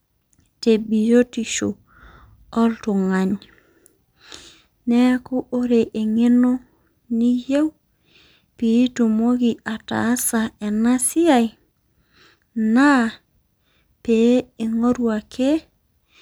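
No technical faults are audible.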